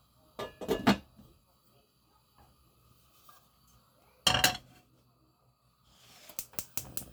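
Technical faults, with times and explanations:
No technical faults are audible in this recording.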